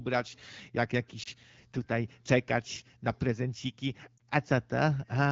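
A brief dip and warble in the speech at 1.23 to 1.28 s and again at 4.17 to 4.22 s are lost AMR speech frames. In each, one 20 ms frame failed its check, and the AMR-WB decoder bridged it by reusing the previous frame's settings.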